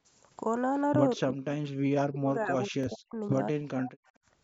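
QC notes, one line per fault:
1.16–1.56 s, 2.05–3.21 s and 3.53–3.95 s, speech suppressed in double talk: the voice dips sharply, by roughly 30 dB in the first span and roughly 40 dB in the longer second and third. This is likely an echo canceller that could not tell the near talker from loudspeaker echo while the far side was speaking, so it attenuated everything. On a waveform the envelope collapses; on a spectrogram the harmonics and upper band thin or vanish in blocks.
2.84 s, Bluetooth stutter: inside the second suppressed span, a short slice of about 23 ms is replayed, giving a brief hiccup before the sound continues as though it had kept playing. The length fits a single late or lost wireless audio packet, with the receiver repeating its last buffer to fill the hole. On a waveform the same small segment appears twice in a row; on a spectrogram a thin vertical stripe repeats, with a hard edge at each join.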